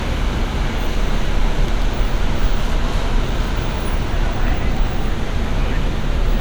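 No technical faults are audible.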